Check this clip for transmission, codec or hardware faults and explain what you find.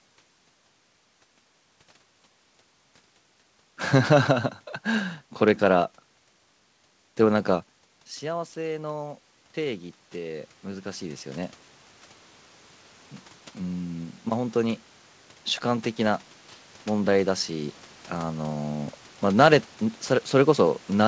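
One fault turns up twice: automatic gain rising. From 8.21 to 11.61 s, after the talker pulls back around 7.5 s and the input drops by about 14 dB, the gain control slowly pushes the level up by about 10 dB. Voice and room noise swell together over those few seconds. It happens again, more gently, from 16.88 to 19.02 s, with about a 4 dB rise. The call path sounds like G.722, with nothing above 8 kHz.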